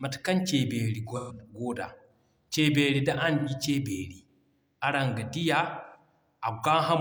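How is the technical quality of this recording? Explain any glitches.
The speech has three brief glitches, all AAC frame loss with concealment: at 1.16–1.38 s, 3.38–3.50 s, and 5.85–5.99 s just after "ga diya". Missing frames, about 128 ms and then 85 ms each, were patched from the last good spectrum. This gives a smeared, phasey fill rather than the hard silence of a plain dropout.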